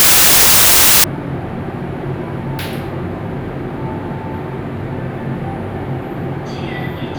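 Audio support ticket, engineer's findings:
0.00–1.04 s: loud broadband noise, original sound buried beneath, playing at 0.667x speed with pitch lowered to two-thirds. Wrong sample width: packed 24-bit samples read as 16-bit, so most values straddle byte boundaries and only some keep the true top bits. Likely fault in the decoder or format-negotiation stage. Unlike a byte-order swap, the speed and pitch shift here.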